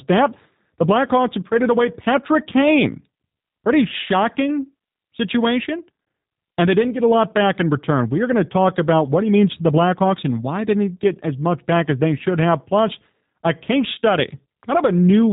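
From start to finish the speech carries G.729 codec damage: everything above about 3.8 kHz is gone, and the voice comes out plainly rough and synthetic, rebuilt from a filter, pitch predictor and a few pulses per frame, which fits a G.729A stream at 8 kbit/s.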